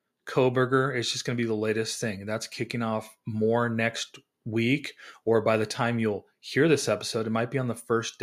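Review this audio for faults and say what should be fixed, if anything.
No faults; nothing to fix.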